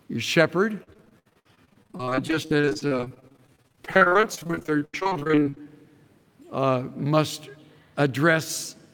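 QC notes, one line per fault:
0.83 to 5.67 s, repeated packet loss (robotic sound): Dozens of short dropouts arrive one after another. Each hole is patched by stretching the last bit of sound forward, so the audio turns choppy. The gaps are brief, the longest about 83 ms. Together they cover roughly a third of this stretch, about 1.8 s of invented fill. The next loss comes before the sound can settle, which gives the robotic texture.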